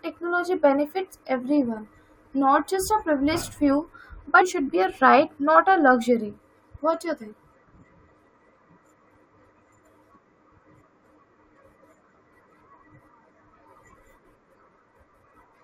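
Speech with an abrupt forward jump and a brief blip at 4.40 s, where a stretch of programme is missing and the audio resumes further on. The likely cause is a stream segment skipped: one segment failed to load and playback continued with the next.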